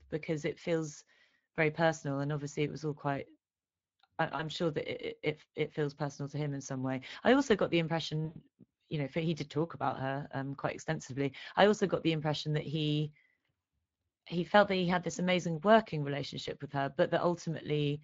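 It's a speech recording carrying the Speex codec the whole way through, and the damage is plainly audible: the CELP coder is short on bits for the excitation, so the voice comes out hoarse and grainy, with any top end above 8 kHz reduced to a noise-like wash. That fits a stream running at roughly 20 kbps. There are also two spots of VoIP packet loss concealed by the speech codec. From 4.35 to 4.45 s, about 40 ms of audio went missing, which fits two 20 ms frames. From 8.25 to 8.37 s, between "i also got the" and "you know he did", about 100 ms is gone. Each time, the decoder keeps replaying its last pitch and filter at falling gain, so you hear a buzzy or noisy, fading smear in place of the lost sound, and the voice takes a moment to firm up once packets arrive again.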